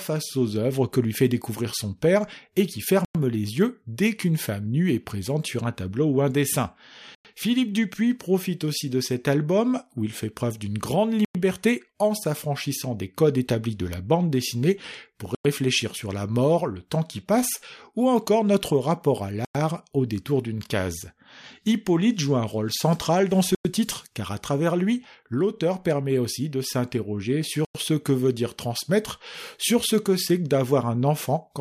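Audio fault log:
3.05, 7.15, 11.25, 15.35, 19.45, 23.55 and 27.65 s: gap between chunks. The speech stops dead for 100 ms after every 4-second chunk, then resumes exactly where it left off. Unlike a dropout, nothing is missing, and the hard-edged holes recur at a steady 4.1-second spacing.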